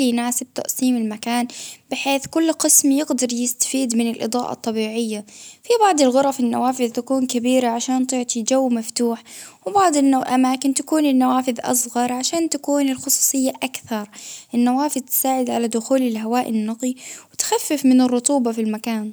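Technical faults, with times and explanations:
No technical faults detected.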